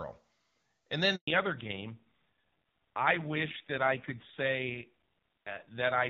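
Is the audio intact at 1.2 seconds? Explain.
No. At 1.2 seconds you're right inside a handover gap, running from about 1.15 to 1.27 s, a 120 ms hole. The call was being passed from one network link to another, and no speech frames came through during the switch. So the sound dies away over a few tens of milliseconds and there's just silence until the new link picks up. Whatever was said in that stretch is simply gone.

The new link isn't the old one, either. Right as the gap ends at 1.27 s there's a fallback to narrowband that lasts to the end. Before that the call was on AMR-WB (HD Voice) at 23.85 kbit/s, which sounded clean. After the gap it comes back on AMR-NB at 5.9 kbit/s. Nothing above 4 kHz survives, and at that low rate the speech sounds duller, boxier and a bit rougher.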